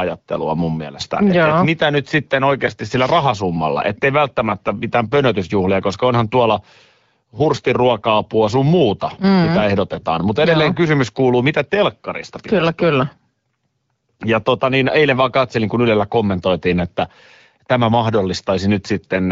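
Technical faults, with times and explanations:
No technical faults are present: the speech comes through the AMR wideband (HD Voice) codec with the clear, band-limited character expected at a rate around 12.65 kbit/s, showing only the light coding traces that path normally leaves.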